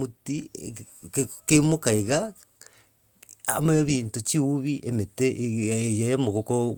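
No audible technical faults detected.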